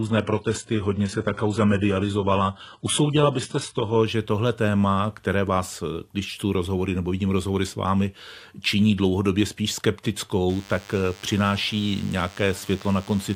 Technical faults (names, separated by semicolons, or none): adaptive stream starting at a low bitrate; DECT cordless phone buzz